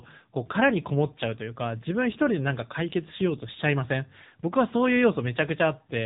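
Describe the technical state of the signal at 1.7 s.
At 1.7 s the speech is carrying AMR narrowband mobile codec damage, present across the whole clip rather than at this moment alone. The band stops at 3.8 kHz, so sibilance and air are missing. The codec models the vocal tract and excites it with a sparse set of pulses per subframe, and at this rate, consistent with a low AMR-NB mode near 8 kbps, that thin excitation is plainly audible as a buzzy, synthetic edge on the voice.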